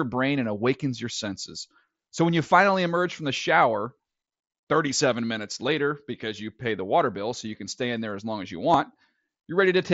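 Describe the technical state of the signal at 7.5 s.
At 7.5 s the speech is intact, with no fault, and it passes through the Bluetooth mSBC headset codec as that path normally sounds.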